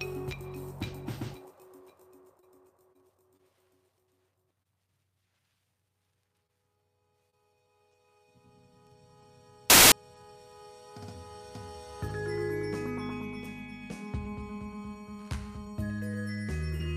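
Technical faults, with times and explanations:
9.70 to 9.92 s, samples built from the wrong bytes: for about 0.22 s the sample bytes are assembled wrongly, shifted or swapped, so the rapidly changing low bits land in the most significant position. The result is a burst of loud, harsh broadband noise replacing the sound.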